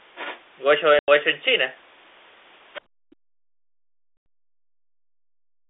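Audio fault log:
0.15–0.4 s, 2.74–2.81 s, 3.11–3.15 s: other side's voice leaking through. A quieter second voice slips in, roughly 15 dB down at first and about 35 dB down by the last scrap, likely leftover echo the canceller missed.
0.99–1.08 s and 4.17–4.26 s: packet loss filled with silence. Each is a 90 ms hole with hard edges, which fits three lost 30 ms packets replaced by dead air.
2.82–3.04 s: background gated by the echo canceller. The room tone ducks by about 37 dB for roughly 200 ms, then comes back once the canceller eases off the mic.
3.32–5.69 s: speech suppressed in double talk. The talker keeps dipping, around 40 dB at worst, likely the canceller clamping down while both sides talked.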